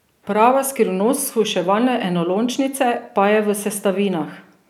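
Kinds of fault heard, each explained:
Nothing stood out on listening to this speech recording.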